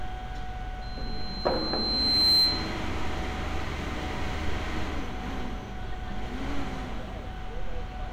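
A clip of sounds carries a loudspeaker feedback squeal from 0.82 s to 2.84 s. A single tone near 4.1 kHz rises out of the background over roughly a second and a half and settles about 10 dB above the rest of the sound. The microphone is hearing its own loudspeaker, and at that frequency the loop gain exceeds unity, so the tone keeps reinforcing itself until the loop is broken.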